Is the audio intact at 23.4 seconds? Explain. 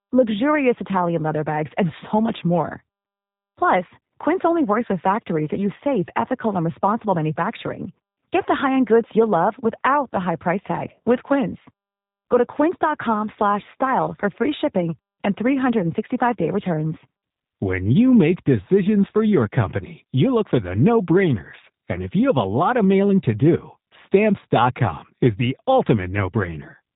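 No. At 23.4 seconds the speech carries G.729 codec damage, and it runs through the whole clip. The sound is rebuilt from a vocal tract filter, a pitch predictor and a few coded pulses in each short frame, rather than from the original waveform. The result is plainly rough and slightly synthetic, with a buzzy, processed edge, which fits an 8 kbit/s G.729A stream. Nothing passes above 3.8 kHz, so the audio sounds narrow and muffled.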